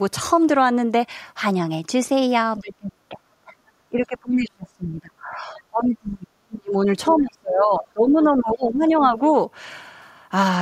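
A speech clip in which the talker repeatedly ducks: speech suppressed in double talk at 2.58–3.63 s, 3.85–6.87 s and 7.11–9.19 s, dropping roughly 25 to 35 dB. This is likely an echo canceller muting both sides during overlap, and it shows as collapsed waveform envelopes. The other side's voice leaks through briefly at 3.67–3.71 s, about 40 dB below the speech, and at 7.1–7.15 s, about 20 dB below. These appear as faint spectrogram smudges, likely from residual loudspeaker echo.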